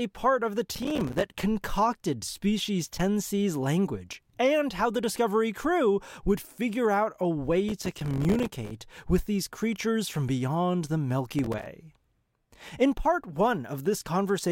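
Processor overload crackle hits at 0.75 to 1.43 s, 7.69 to 8.71 s and 11.39 to 11.66 s. The processor keeps missing buffer deadlines. Each miss leaves a silent gap of a few milliseconds. These hard-edged dropouts merge into gritty crackle over the speech.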